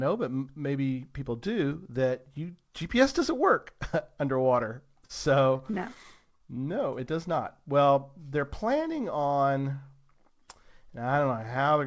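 At 5.05 to 5.12 s there's a short stall from a late packet. A packet wasn't ready when it was due, so the jitter buffer ran dry and the receiver kept extending the last bit of speech, about 39 ms of it, until the data showed up. Then it carried on from the same spot. Nothing's actually lost. You just hear a sound held a touch too long, with a faint buzzy smear, and everything after it sits roughly 39 ms later.

Shortly after, from 5.58 to 6.60 s, there are repeated stalls, a stutter. Packets kept arriving late, so the buffer emptied eight separate times across that second. Each time the receiver filled in by continuing the last sound, adding up to about 107 ms of patched audio, around 11% of that stretch, with the longest single gap 27 ms. Nothing drops out, but the speech drags and hiccups unevenly. It all sits on a call-codec sound with nothing above 8 kHz, which points to a wideband G.722-style path.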